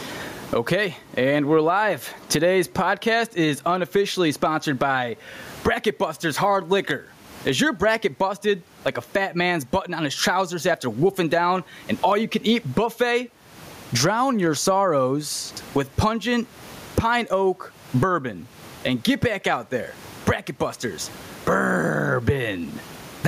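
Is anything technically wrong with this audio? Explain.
Yes. Throughout the speech, gain pumping: the gain swings about 25 dB, with the background about 42 dB below the speech, leaving the speech squashed and flat. The likely cause is gain set far too high, with a fast limiter or compressor clamping down on each loud sound.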